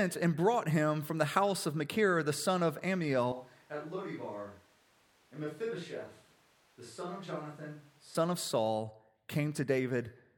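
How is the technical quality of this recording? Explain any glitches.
The recording has one clear glitch in the speech. From 3.32 to 8.15 s, a switch to a distant microphone, likely after the close mic dropped out: the sound turns roomy and thin, roughly 10 dB quieter, with room noise closer behind. The waveform shrinks abruptly, and the spectrogram loses low-end energy while reverb tails smear between syllables.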